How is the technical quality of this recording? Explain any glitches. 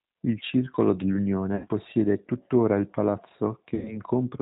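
The technical quality is limited. A low-bitrate speech codec runs through the whole recording, and two short dropouts interrupt it.

Throughout, G.729 codec damage is plainly audible. Nothing above 4 kHz survives. The speech sounds rough and slightly synthetic, because the decoder rebuilds it from a vocal tract filter, a pitch predictor and a few pulses per frame. This fits an 8 kbit/s G.729 stream.

At 1.56 to 1.67 s and again at 3.75 to 3.98 s, there is VoIP packet loss concealed by the speech codec. About 80 ms and then 100 ms of audio are missing. The decoder extends its last pitch and filter with falling gain. The result is a buzzy tone or coloured noise that fades, and the speech stays weak briefly after each gap.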